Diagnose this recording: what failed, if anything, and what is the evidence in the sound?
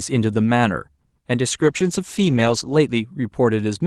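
A call bitrate drop at the codec stage, driven by the call's rate control, runs from 1.62 to 2.83 s. The speech turns coarse and muffled, with the top end cut away for about 1.15 s, which fits the encoder dropping from roughly 48 to 11 kbps. Unlike packet loss, the sound stays continuous with no gaps or stutters.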